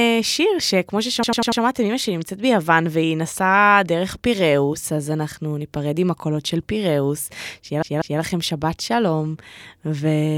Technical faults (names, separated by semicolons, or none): repeated frames